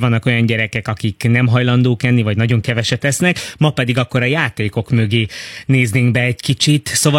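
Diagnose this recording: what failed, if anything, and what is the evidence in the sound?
At 2.63 s, after "hajlandók enni vagy nagyon", the network stage drops to an adaptive stream at a lower bitrate with no gap. Codec artefacts rise, and the spectrogram goes empty above 16.3 kHz.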